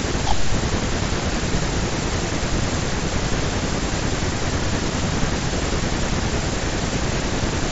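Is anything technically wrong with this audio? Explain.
No, the speech has no technical faults; it comes through a Bluetooth mSBC headset codec working as designed, with its usual 8 kHz bandwidth ceiling and a light grain typical of that link.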